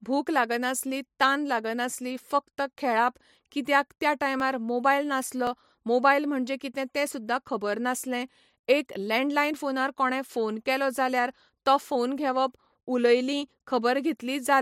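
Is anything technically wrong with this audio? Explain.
Yes. At 4.4 s, just after "कित्याक त्या", and at 5.47 s, just before "मोबायल म्हणजे कितें तें", the speech jumps forward, likely a dropped buffer (overrun): samples were overwritten before being read, so roughly 15 ms and 5 ms vanish and the edges splice together without silence.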